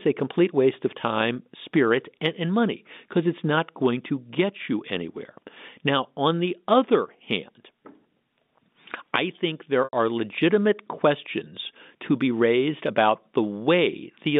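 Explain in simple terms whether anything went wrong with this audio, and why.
At 9.84 s a brief run of audio packets went missing, about 90 ms' worth, which fits three lost packets. This is packet loss with pitch repetition: the receiver filled the hole by repeating the last bit of sound, giving a short held buzz between "I think" and "are legitimate questions to".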